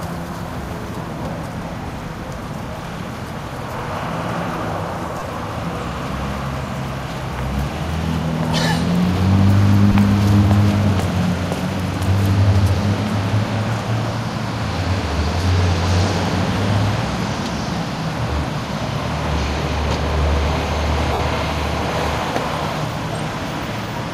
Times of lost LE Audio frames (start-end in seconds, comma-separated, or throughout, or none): 5.19-5.22, 9.92-9.95, 21.13-21.20